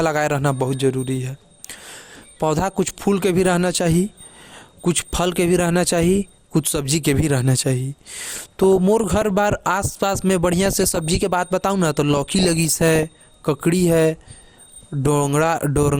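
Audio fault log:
throughout, MP2 compression: dull, gurgling speech with granular grit, likely from MPEG Layer II coding at a low rate, around 80 kbps, starving upper sub-bands of bits.
5.03–5.17 s, 8.35–9.31 s, 10.52–11.16 s, 12.14–13.03 s, DAB burbling: short noise blips in sub-bands over speech as bit errors of a fraction of a percent corrupt sub-band samples frame by frame.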